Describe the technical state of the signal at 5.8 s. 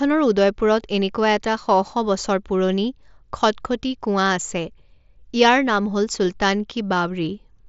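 At 5.8 s the speech is intact, carried through the Bluetooth mSBC headset codec with nothing heard above about 7.7 kHz, as that wideband link allows.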